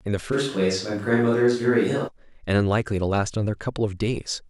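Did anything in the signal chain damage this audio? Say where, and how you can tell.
Yes. At the capture stage, from 0.34 s to 2.07 s, the speech turns suddenly roomy and hollow, then snaps back just as abruptly. The level hardly changes. Room noise sits roughly 40 dB below the speech. This is likely a switch to a distant microphone after the close one dropped out.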